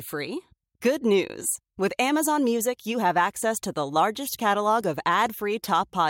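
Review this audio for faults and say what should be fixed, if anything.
No faults found; nothing needs fixing.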